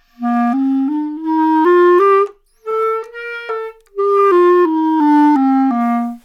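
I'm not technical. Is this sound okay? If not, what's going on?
Yes, no faults to report.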